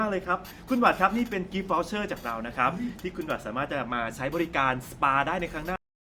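At about 5.76 s the speech just stops dead, and what's left of the clip, roughly the last 0.37 s, is flat digital silence. That's a cut-off end: the final stretch of audio never made it out, as if the last buffers weren't written before the file was closed. The sound is chopped mid-flow with no natural decay or room tail, so it feels abruptly severed rather than finished.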